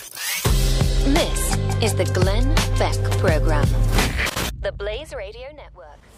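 From 4.48 to 5.81 s, zipper noise appears. The level drops roughly 20 dB in unsmoothed 1 dB steps, about fifteen per second, each one clicking audibly.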